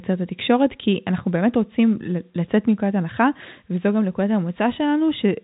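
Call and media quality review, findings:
Speech arrives through G.711 A-law telephone coding, consistent with a 64 kbps call leg, with content rolling off at about 3.8 kHz and any level-following quantisation hiss faint.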